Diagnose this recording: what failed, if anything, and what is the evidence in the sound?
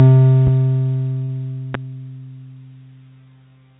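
Two sharp loud pops sit on top of the music, the first at 0.47 to 0.50 s, a few dB above the signal, and the second at 1.74 to 1.77 s, louder at about 10 dB above it. The music carries on underneath each one. The stage is most likely the analogue wiring or a driver: a sudden voltage step from a connector, switch, static discharge or driver glitch is added to the signal, and the circuits that follow shape it into a single thump.

Between 1.24 and 1.30 s the music briefly smears, with a short stretch that sounds held over rather than played. This is short concealed packet loss on the network side of a call path. About 40 ms of audio arrived too late for the decoder, so the receiver extended the preceding sound to cover the gap and then cross-faded back into the real signal. The call path itself passes nothing above 4 kHz, which fits a 64 kbps G.711 mu-law telephone-band codec.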